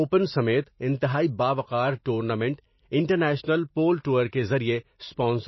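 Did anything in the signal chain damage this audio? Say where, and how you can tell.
Yes. At the codec stage, the speech was likely squeezed through MP3 compression at a low bitrate, with plainly audible damage. Nothing survives above 5.8 kHz, which fits about 24 kbps. Starved of bits, the encoder drops weak frequency lines frame by frame, so the sound turns watery and swirly.

Pre-echo, also from the codec, appears from 4.28 to 4.33 s: a 50 ms wash of hiss arrives just before a sharp onset. The block's quantisation noise, sized for the loud attack, spreads into the quiet moment ahead of it, smearing the attack.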